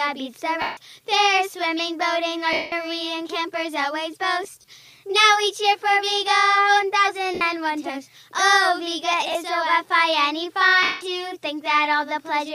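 Lost LE Audio frames occur at 0.62–0.77 s, 2.53–2.72 s, 4.44–4.68 s, 7.34–7.41 s, 9.32–9.35 s and 10.83–11.01 s. Dropped Bluetooth packets forced the decoder to replay the last spectrum with scrambled phase, turning tones into a noisy smear that fades during the longer gaps. At 4.44 s the losses are scattered, with the longest run about 30 ms.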